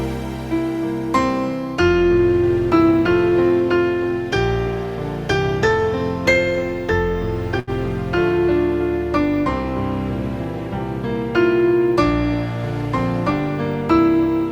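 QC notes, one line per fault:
7.59–7.70 s: burst of packet loss. Roughly 80 ms of consecutive packets never arrived in time; the receiver stretched the preceding sound across the gap and faded it down, then playback jumped ahead, so about 80 ms of audio is simply missing.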